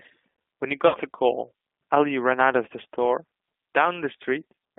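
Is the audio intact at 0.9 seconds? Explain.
No. From 0.875 to 0.97 s, VoIP packet loss concealed by the speech codec takes over: about 60 ms of audio went missing, which fits three lost packets. The decoder repeated its last pitch and filter at falling gain, so the sound smears into a fading buzzy tone or coloured noise. A plain dropout would leave silence or a click instead. The sound then stays weak or distorted briefly after packets resume, because each frame builds on the previous one.

Underneath, the G.729 codec runs throughout. Its roughness and slightly synthetic texture point to an 8 kbit/s stream that rebuilds the sound from a filter, a pitch predictor and a few pulses per frame. The band is confined to about 200 Hz to 3.5 kHz. That grainy model-based quality is what sets it apart from a simple low-pass filter.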